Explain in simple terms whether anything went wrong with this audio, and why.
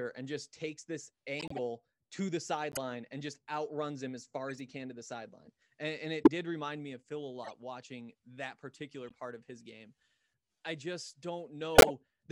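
Corrupt frames were decoded at 1.39–1.59, 2.72–2.77, 4.48–4.60, 6.23–6.28, 7.44–7.52, 9.09–9.14 and 11.75–11.90 s. Each one is a brief chirp or noisy blip in the speech. Some of the compressed data got scrambled, and the player decoded those damaged chunks anyway. That put sound at the wrong pitches for a split second. The bursts at 6.23 and 11.75 s stand out most, and the one at 9.09 s is faint.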